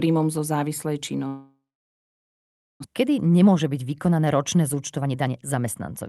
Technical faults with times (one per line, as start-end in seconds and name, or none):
1.27-2.86 long network dropout
2.93-6.08 jitter buffer speed-up